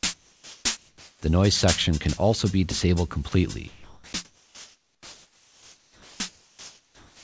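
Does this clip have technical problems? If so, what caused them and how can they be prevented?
Yes. Comfort noise replaces the background at 0.14–0.65, 0.77–1.22, 4.25–6.20 and 6.29–7.23 s. The real background gives way to smoother synthetic noise about 2 to 6 dB quieter, likely because discontinuous transmission stopped sending during pauses. To prevent this, disable discontinuous transmission, or use a comfort noise generator that matches the background's level and tone.

The onset is clipped by the voice detector at 1.18–1.22 s. The first 40 ms of the returning sound are missing, so it starts abruptly, likely because the voice detector reacted late. To prevent this, lower the detector's threshold or add a pre-roll buffer so onsets are sent.

Sound is dropped by the voice detector at 3.29–3.32 s, losing 30 ms, and at 3.68–4.13 s, losing 180 ms. Audible sound turns into steady noise, likely because the detector mistook it for background. 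To prevent this, lengthen the detector's hangover time or make it less aggressive, so quieter passages keep being sent.

The call path itself leaves nothing above 8 kHz, consistent with the G.722 codec.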